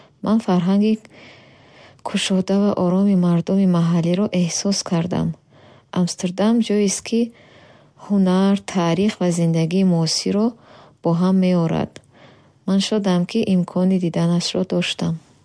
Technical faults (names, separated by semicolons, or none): none